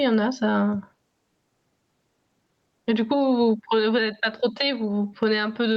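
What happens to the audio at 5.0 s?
At 5.0 s the speech is still caught in the gain pumping that runs through the whole clip, likely from input gain set far too high with a fast limiter clamping each loud sound. The gain swings by around 10 dB, pulled down under each loud sound. The waveform shows a flattened, squashed envelope, and the spectrogram shows level swinging up and down below the call path's 8 kHz ceiling.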